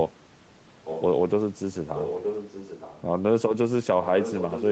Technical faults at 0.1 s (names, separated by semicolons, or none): none